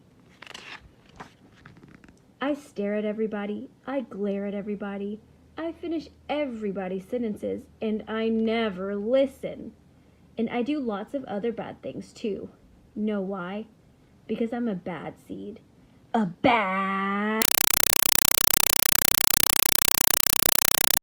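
Compressed stream played as audio, from 17.42 s to the end at 21.02 s: an encoded AC-3 (Dolby Digital) bitstream reaches the output as if it were ordinary samples, and nothing decodes it. Each frame of data plays as a 4 ms burst of harsh noise followed by digital silence, repeating 31.25 times a second. The result is a very loud, rapidly chattering static that replaces the sound entirely; its density points to a 192 kbps stream.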